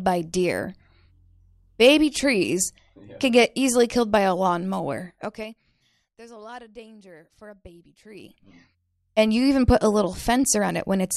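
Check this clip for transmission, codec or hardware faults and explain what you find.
Zipper noise appears twice in the speech: from 5.02 to 5.76 s the level drops about 25 dB in 3 dB steps, roughly ten a second; just after "danger for a baby", 8.08 to 8.45 s, it rises about 25 dB, around twenty steps a second. Unsmoothed gain jumps tick audibly, showing as staircase envelopes and thin vertical spectrogram lines.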